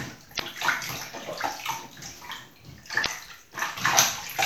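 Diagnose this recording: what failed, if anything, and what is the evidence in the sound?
Two short glitches, at 0.36 to 0.40 s and 3.02 to 3.06 s, each lasting about 40 ms, point to damaged data in a compressed stream at the codec stage. Corrupted bytes made the decoder misread those frames and lose sync until it found the next valid frame header.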